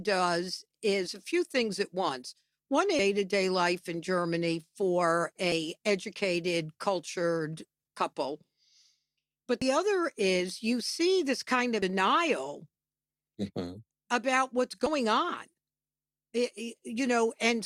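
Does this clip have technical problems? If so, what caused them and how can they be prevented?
Yes. Damaged data in a compressed stream produces five brief glitches in this speech: 2.99–3.02 s (just before "to day life in"), 5.52–5.55 s (before "educated cultured couple"), 9.62–9.65 s, 11.82–11.86 s, and 14.86–14.90 s (right after "about what's"). Each burst lasts about 32 ms. Corrupted bytes make the decoder misread frames and lose sync, so it emits garbage until it locks onto the next valid frame header. Using checksummed transfers and error-protected containers, and verifying files after copying, prevents this.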